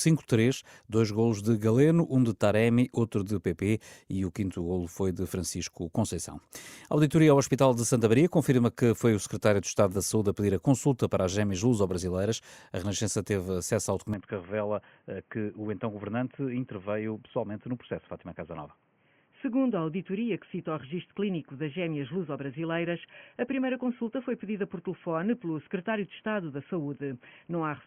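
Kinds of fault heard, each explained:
Input switched to a poorer device: The recording system likely changed its input partway through, moving to a lesser microphone or a headset's call profile with a narrower passband. At 14.14 s, right after "teve acesso ao", the speech abruptly turns dull and boxy, with nothing above 3.3 kHz, drops roughly 5 dB in level, and picks up a new background hiss far below the voice. There is no gap at the changeover, and the degraded sound continues to the end.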